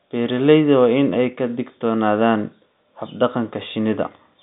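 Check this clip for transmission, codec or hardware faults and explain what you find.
No faults turn up in this speech, which carries the band-limited sound of G.711 telephone coding working as intended: a line band of about 150 Hz to 3.7 kHz, nothing above 3.8 kHz, and at most faint coding noise, consistent with A-law at 64 kbps.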